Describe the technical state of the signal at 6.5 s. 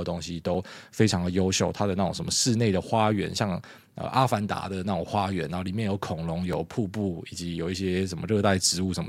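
At 6.53 s a block of digital silence lasting about 2.9 ms, which fits a 128-sample buffer left unfilled in time, cuts the speech abruptly to zero and back. It sounds like a tick. The waveform shows a flat gap with hard edges, and the spectrogram shows a thin vertical broadband line.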